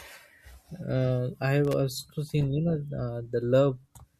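From 1.65 to 1.74 s, just after "I have", a burst of loose connector crackle breaks up the speech: a worn contact repeatedly makes and breaks, chopping the signal with scratchy crackle. Its irregular, gritty spacing separates it from a single clean digital click or steady clipping distortion.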